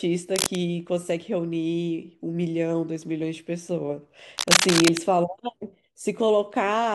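From 0.36 to 0.56 s, and again from 4.38 to 4.97 s, dense, irregular scratching and rustling sits over the speech, roughly as loud as the speech the first time and somewhat louder the second. This is cable scratch noise, likely from a worn cable or connector being moved so its contact resistance jumps rapidly. A spectrogram shows ragged broadband smears across both spans, and the waveform shows jagged, uneven bursts on top of the speech.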